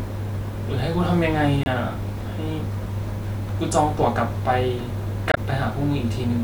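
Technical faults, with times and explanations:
1.63–1.67 s and 5.29–5.38 s, damaged data in a compressed stream: two brief bursts break into the speech, about 40 ms and then about 86 ms long, heard as a chirp or squawk. Corrupted bytes in the compressed data make the decoder misread those frames and lose sync until it finds a valid frame header again. On a spectrogram each burst is a narrow vertical smear of broadband or metallic energy that disrupts the harmonic bands. The waveform shows an abrupt discontinuity or a jagged patch at each point.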